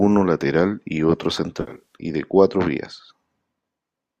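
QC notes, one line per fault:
1.61–1.95 s, AAC frame loss with concealment: just after "lateral y otro", about 170 ms of audio is lost in several short bursts spread over roughly a quarter second, the longest around 70 ms, which fits a handful of dropped frames. The decoder patches each gap from the last good spectrum, so the speech turns smeared and phasey instead of going silent. That is what separates it from a plain dropout. Clean audio returns by "y de cuatro vías".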